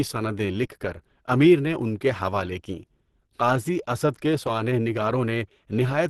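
Opus compression runs throughout this speech clip: nothing is present above 12.1 kHz, and the audio sounds muffled and hoarse with grainy roughness, most likely from Opus working in its hybrid speech mode at a rate that fits about 16 kbps.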